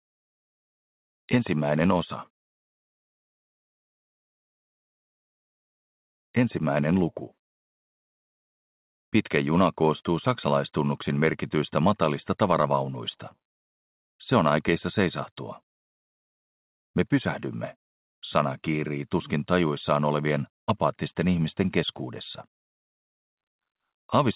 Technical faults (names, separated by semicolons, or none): burst of packet loss